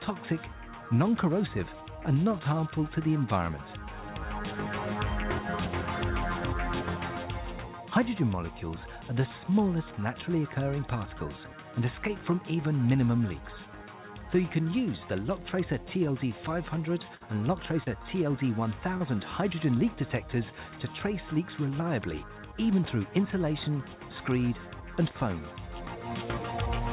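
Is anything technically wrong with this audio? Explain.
Yes. The audio has one burst of packet loss and two short concealed packet losses, all within about two seconds, heard over a narrowband call path whose cut-off at 4 kHz fits G.711 mu-law at 64 kbps.

At 17.15 to 17.24 s there is a burst of packet loss. Several consecutive packets failed to arrive in time. The receiver extended the last good sound for about 55 ms and faded it down. The sound becomes a held buzz or a thinning hiss, then jumps ahead, with roughly 60 ms of the original gone.

Short concealed packet losses occur at 17.84 to 17.89 s and at 18.97 to 19.03 s. Each time, about 30 ms of audio missed the decoder. The receiver synthesised a fill of about 27 ms and 31 ms respectively by continuing the preceding pitch or noise, then cross-faded back into the real signal. Each gap comes across as a brief smear or wobble, and a short sound there may simply disappear.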